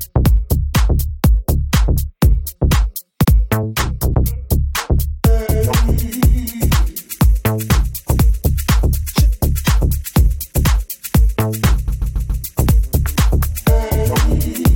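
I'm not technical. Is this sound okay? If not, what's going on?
No. The audio has repeated frames. The file is stored as small compressed chunks, and a short run of them got played again. At 3.23 s, a 70 ms piece plays twice in a row, a quick stutter. At 11.87 s it is worse. A 139 ms piece repeats four extra times, until about 12.43 s, so that moment sounds stuck. These repeats make the clip about 0.63 s longer than it should be.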